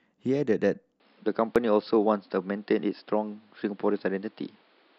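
At 1.0 s the speech abruptly loses its top end and stays that way to the end. Nothing remains above about 5.3 kHz, the level shifts by roughly 5 dB, and a new noise floor appears, sitting around 40 dB under the speech. There is no gap at the change. The likely cause is the input switched to a poorer device, such as a second microphone or a headset's call profile, whose narrower band and different tone take over mid-recording.

At 1.56 s there is a brief click or skip, caused by overlap between stream segments. Two consecutive segments carried overlapping time stamps, and the player trimmed about 13 ms of audio that was never actually duplicated, so the waveform jumps from one point to a later one. Only this one discontinuity occurs, which fits a stream split into segments of roughly 4 seconds, with the boundary falling here.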